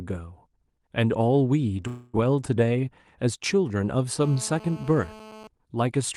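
At 1.87 s the speech stops advancing and the last sound is held as a fading buzzy tail until 2.16 s, a call audio freeze about 0.26 s long. The tail never drops to silence, and when the audio resumes it carries on where it left off, with nothing skipped. Everything afterwards runs about 0.26 s late. The likely cause is packets held up in transit, so the jitter buffer ran empty and the receiver stretched the last sound to bridge the wait.

From 4.22 s to 5.47 s a hard, raspy GSM phone buzz sits under the speech, about 19 dB below it. Its fundamental is 217 Hz, matching the burst rate of a 2G handset transmitting nearby. The audio circuitry rectifies those radio pulses into a harmonic-rich buzz that has no relation to the speech. Its steady character throughout the 1.25 s stretch fits a phone in an active call rather than a data transfer.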